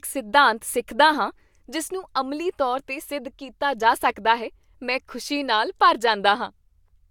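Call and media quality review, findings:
No technical faults were found in the speech signal; level, continuity and timing stay stable throughout the recording.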